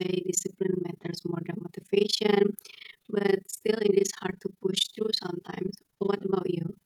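The speech carries overlap-add ripple from start to finish: the level pumps up and down around 30 times a second, with dips of about 60 dB, giving a hard, robotic flutter over every syllable. The frames were rejoined with an overlap whose windows don't sum to a steady gain, so each frame boundary leaves a near-silent notch. On a waveform the envelope looks chopped into evenly spaced bursts, and a spectrogram shows regular vertical gaps striping the entire clip.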